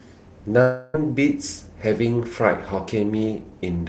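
From 0.61 to 0.96 s the speech gives way to a buzzy, smeared continuation of the sound just before it. It fades instead of stopping cleanly, and when the talk resumes about a third of a second of it is simply gone. This is likely a long network dropout, with the receiver stretching old audio to cover the hole. A brief packet-loss glitch would last only a few tens of milliseconds, but this concealment runs long enough to fade, yet never drops to true silence.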